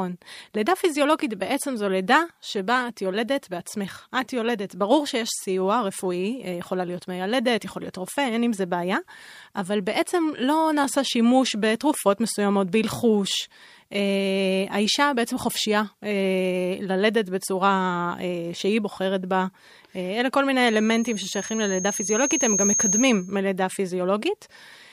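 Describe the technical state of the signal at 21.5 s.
At 21.5 s the speech is under a loudspeaker feedback squeal running from 20.67 to 23.41 s. The microphone re-amplifies its own loudspeaker output, so a 6.4 kHz tone swells over roughly two seconds to about 5 dB above the speech. A spectrogram shows a brightening horizontal line at 6.4 kHz, and the waveform envelope visibly thickens.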